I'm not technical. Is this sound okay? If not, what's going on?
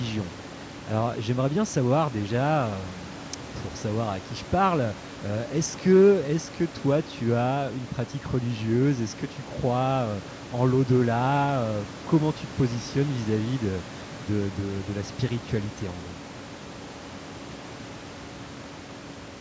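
Yes, I hear no problems in this recording.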